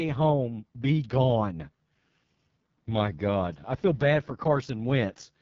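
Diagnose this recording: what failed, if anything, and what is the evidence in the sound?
The failure is at the codec stage: the AMR wideband (HD Voice) codec, running at what sounds like its lowest mode, around 6.6 kbit/s. Throughout the clip the speech is rough and raspy, and nothing is present above about 7.5 kHz. At this rate the pulse-driven vocal tract model has too few bits to track the voice faithfully below 6.4 kHz. The band above that is only shaped noise, which adds hiss but no detail.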